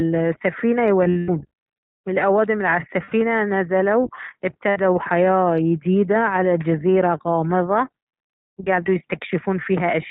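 Speech coded through the iLBC codec, with three bursts of lost iLBC frames. The whole clip is narrowband, with nothing above 4 kHz, and has a plainly audible rough, slightly synthetic edge. That texture fits iLBC's 20 ms frame mode at 15.2 kbps, since each frame's excitation is coded on its own. This separates it from the smeared, frame-to-frame wobble of codecs that predict across frames. The losses fall at 1.04 to 1.30 s, 3.04 to 3.13 s and 4.70 to 4.79 s. The first spans about 240 ms, with roughly 180 ms actually missing in scattered pieces, the longest run near a tenth of a second. The other two last about 80 ms and 60 ms. Rather than dropping to silence as a plain dropout would, each gap is filled with a held, faintly buzzy, breathy vowel. The decoder repeats the last pitch cycle with noise mixed in and fades it over the longer run. Because each iLBC frame stands alone, the voice returns almost immediately after each gap.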